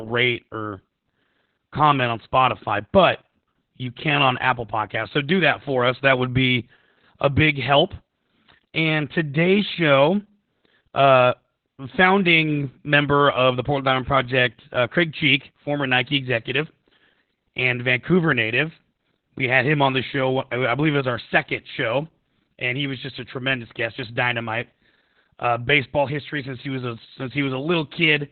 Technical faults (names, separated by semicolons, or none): Opus voice compression